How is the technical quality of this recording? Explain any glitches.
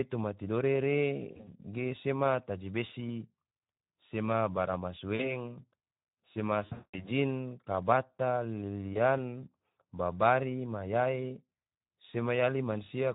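The recording has two audible problems: low-rate speech coding across the whole clip, and four brief dropouts patched over by the decoder.

Speex codec, throughout: The speech was squeezed through Speex, a CELP codec that models the vocal tract with a filter and spends its few remaining bits on the excitation signal driving it. The damage is plainly audible, and it fits a rate around 11 kbps. The excitation is too coarse to sound natural, so the speech comes out noisy and hoarse.

VoIP packet loss concealed by the speech codec, at 1.32–1.52 s, 5.15–5.32 s, 6.65–7.09 s and 8.93–8.98 s: Packets went missing, and the decoder filled each gap by replaying its last pitch and filter settings at falling gain. The worst stretch is at 6.65–7.09 s, where about 260 ms is lost, including one unbroken 200 ms run. The other gaps are shorter, costing roughly 100 ms (scattered), 40 ms and 20 ms. Because each decoded frame depends on the previous one, the speech stays weak or distorted for a moment after real packets resume.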